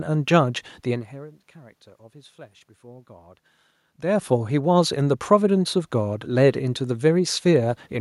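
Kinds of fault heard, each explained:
No system faults are present in the signal: the background noise belongs to the room, and the level changes around 1 s and 4 s come from the talker moving relative to the microphone rather than from any recording, processing or transmission problem.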